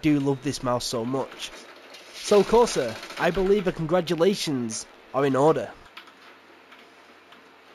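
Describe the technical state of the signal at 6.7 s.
At 6.7 s the signal shows imaging from linear upsampling, present throughout the clip. The sound points to a 16 kHz source raised to 44.1 kHz by straight-line interpolation. The top is dulled, and a mirrored image from 8 to 16 kHz, roughly 25 dB down, adds a faint metallic shimmer.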